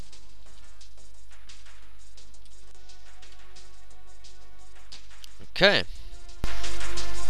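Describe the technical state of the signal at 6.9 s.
At 6.9 s the signal sits inside a sudden gain jump. It begins at 6.44 s and runs to the end of the clip. The level steps up by about 15 dB from one sample to the next, with no ramp. The sound and its background noise rise together, so the noise floor lifts as plainly as the foreground. The likely cause is a digital gain setting or bit shift applied instantly.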